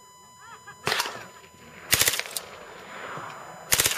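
A steady USB whine sits at 1 kHz for the whole clip, roughly 25 dB below the sound, as current drawn in the bus's 1 ms frames leaks through power or ground. On a spectrogram it is a thin, unbroken horizontal line at 1 kHz.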